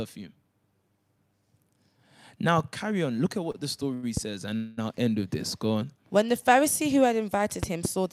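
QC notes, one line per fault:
3.51–3.56 s and 3.94–4.05 s, short stall from a late packet: the speech hangs on one sound for about 26 ms, then about 88 ms, as the jitter buffer runs dry and the last sound is stretched. Nothing is lost, but each stall leaves a held moment with a slight buzz or dip.
4.17–4.20 s and 7.63–7.87 s, loud pop: a single sharp pop, roughly 10 dB above the speech, then later a pair of pops, roughly 15 dB above it. Each is a likely voltage step or pulse added to the signal, while the speech carries on underneath.
4.56–4.79 s, call audio freeze: for about 215 ms the speech stops moving forward and the last sound continues as a fading buzz or hiss, with no full silence. This is the likely result of packets held up in transit emptying the jitter buffer. The speech then resumes where it stopped, so a gap is inserted and nothing is missing.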